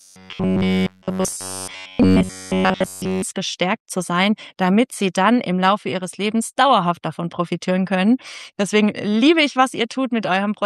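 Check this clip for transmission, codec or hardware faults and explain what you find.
One fault is present: robotic sound from repeated short buffers, from 0.01 to 3.22 s. Throughout that stretch the audio becomes a rigid, metallic buzz pitched at 93.8 Hz, with essentially all of it built from repeats rather than fresh material. The likely cause is new audio arriving too late, so playback loops the last block of roughly 10.7 ms over and over. That loop period sets the fixed buzz pitch, while the skipped audio leaves only a rough trace of the original contour.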